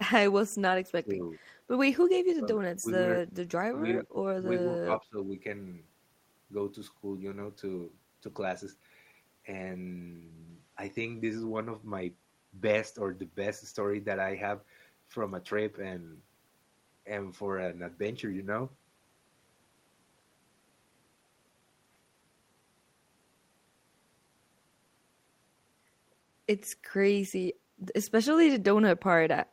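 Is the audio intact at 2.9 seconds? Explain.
No. From 2.8 to 2.89 s the speech is caught by speech suppressed in double talk: it dips sharply, by about 20 dB at its deepest, for roughly a tenth of a second. The likely cause is an echo canceller that couldn't tell the near talker from loudspeaker echo and attenuated both. On the waveform the envelope pinches to a narrow waist; on a spectrogram the energy thins abruptly.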